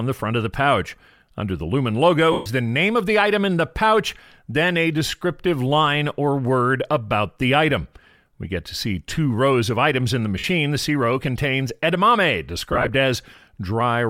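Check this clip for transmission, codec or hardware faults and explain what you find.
There are dropouts from lost LE Audio frames, three of them.

At 2.32 to 2.47 s, just before "the name of the", about 135 ms goes missing. At 10.38 to 10.44 s, right after "of items in the", it's a shorter 52 ms hole. At 12.72 to 12.90 s, after "row contains edamame", the losses are scattered over about 165 ms in bursts of around 20 ms. Each gap is filled by the LC3 decoder, which replays the last spectrum with its signs randomised. That turns tonal sound into a hissy smear, and in the longer first gap it also fades down as the concealment runs on.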